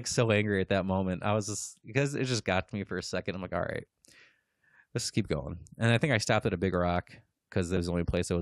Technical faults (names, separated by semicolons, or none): compressed frames skipped